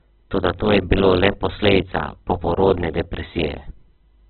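Speech, grainy and rough throughout, with nothing above 4.4 kHz: likely heavy Opus compression at a very low bitrate, with noise-filled bands in place of MP3-style swirling holes.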